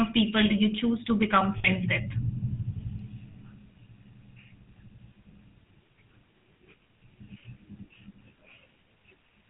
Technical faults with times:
0.00-9.50 GSM full-rate codec
1.58-1.67 lost GSM frames
3.32-3.35 lost GSM frames
7.72-7.75 lost GSM frames

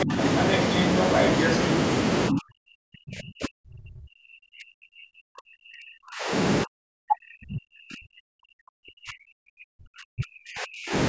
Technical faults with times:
0.05-0.18 speech suppressed in double talk
0.35-1.57 other side's voice leaking through
2.30-6.33 speech suppressed in double talk
6.64-10.94 speech suppressed in double talk

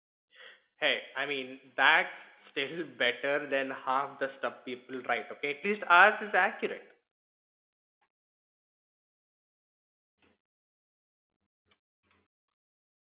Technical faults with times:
none

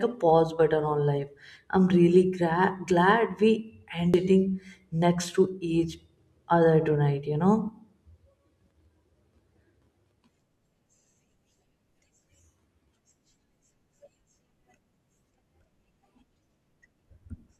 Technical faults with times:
4.14 damaged data in a compressed stream

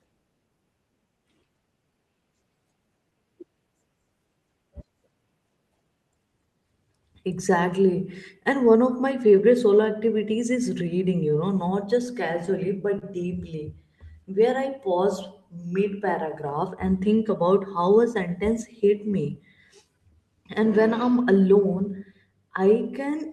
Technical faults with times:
0.00-23.32 clock drift between sender and receiver
0.38-23.12 repeated timing corrections
11.58-22.33 scattered short gaps

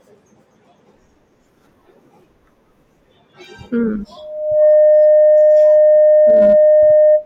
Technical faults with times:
4.16-7.25 loudspeaker feedback squeal

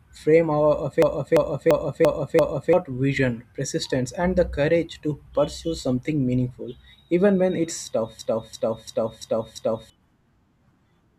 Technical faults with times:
1.02-2.73 system hang loop
8.19-9.90 system hang loop

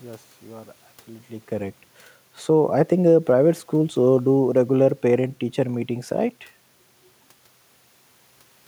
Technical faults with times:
3.96-6.47 automatic gain falling

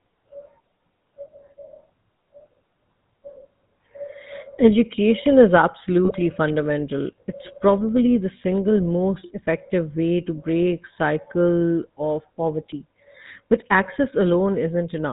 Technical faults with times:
0.00-15.12 GSM full-rate codec
6.05-6.12 GSM bit errors

